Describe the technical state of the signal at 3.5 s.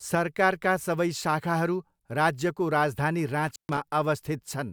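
An intermittent contact disrupts the speech from 3.47 to 3.78 s. A loose connection opens for about 130 ms, cutting the sound with crackle and leaving faint hiss.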